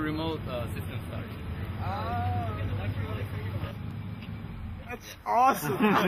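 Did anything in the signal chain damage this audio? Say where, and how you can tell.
Yes. Overlapping chunks at 3.91 s: a brief click-like stutter where about 13 ms of sound plays twice. The damage happened at the buffer or chunked-processing stage. The audio was handled in blocks of roughly 2.5 s, and at this join the next block began before the previous one had finished. The overlapping sliver was output twice, so the waveform breaks and repeats at that instant, producing an audible hiccup.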